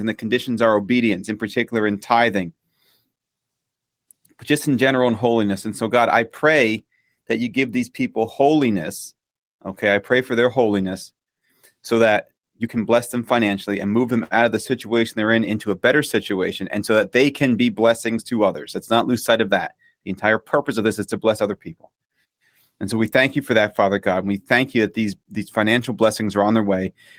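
A lost packet was rebuilt from error correction twice: the decoder filled each gap with the lower-quality copy carried in the following packet. From 5.09 to 5.11 s, just after "but just in general", a 20 ms stretch turns briefly rough and noisy, which fits a single lost packet. From 26.23 to 26.41 s, after "that these these financial", a longer 100 ms stretch sounds grainy in the same way, consistent with several separate packets being rebuilt.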